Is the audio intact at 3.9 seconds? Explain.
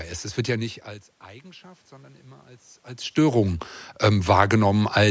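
No. At 3.9 s the sound is in the middle of an automatic gain rising that runs from 1.26 s to 5.06 s. The input level fell by about 22 dB, and the automatic gain control treated it as too quiet. It then raised its gain slowly, by about 6 dB over those four seconds. The voice and the room noise swell together. The background grows steadily louder as the gain climbs.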